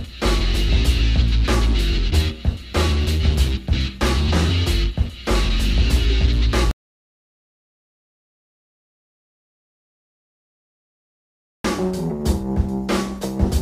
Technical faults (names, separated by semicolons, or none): audio dropout to silence